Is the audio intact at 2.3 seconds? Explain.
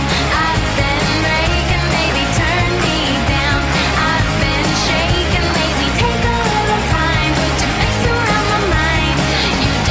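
Yes, the audio at 2.3 seconds is intact, with no dropout, click, distortion or other fault at that moment.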